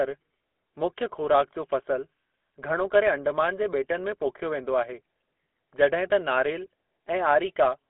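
Across the whole clip the speech carries the gritty, buzzy roughness of the GSM full-rate codec, its excitation rebuilt from sparse regular pulses at a rate that fits 13 kbps. A spectrogram shows a 250 Hz to 3.4 kHz telephone band, empty above 3.8 kHz.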